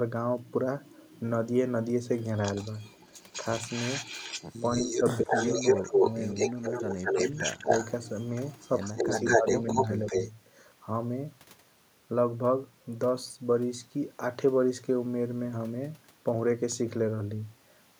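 From 2.22 to 10.31 s there is an echo leak, likely from a far end on a loudspeaker whose echo canceller let its microphone pick-up return down the line. A copy of the speech comes back 201 ms late, roughly as loud as the original, so the speech is shadowed by a delayed, overlapping repeat.

Inside that stretch, the speech is suppressed in double talk, likely because the canceller could not separate the talker from the returning echo and turned both down. The drops fall at 5.21 to 6.05 s (a moderate dip of around 10 dB), 6.36 to 7.18 s (the deepest, cutting the speech almost away), 7.59 to 7.68 s (a brief moderate dip), 8.92 to 9.46 s (a deep cut), and 10.05 to 10.15 s (a slight dip). Each one makes the speech sink or break off in pieces.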